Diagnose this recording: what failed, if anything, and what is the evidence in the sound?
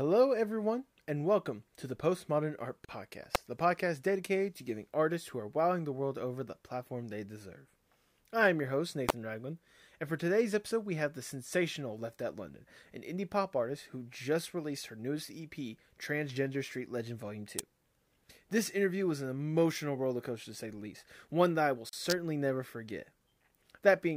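Two speech dropouts point to the codec and file-assembly stage: a gap at a join of encoded pieces. At 2.85–2.89 s there's about 39 ms of silence, and at 21.89–21.93 s about 37 ms, each with smeared edges before the speech resumes exactly where it left off. Whoever stitched the segments didn't trim each encoder run's leading delay and final-frame padding, so that dead air got baked into the joins.

The other fault sits on the analogue side, in the wiring: an electrical switching spike. Sharp snaps or tight clusters of clicks land on top of the speech at 3.35 s, 9.09 s and 17.59 s, with a longer one at 22.10–22.12 s. They're short, hard transients added over the signal rather than cutting into it. The likely culprit is a nearby switch, motor or static discharge arcing and being picked up by the audio line.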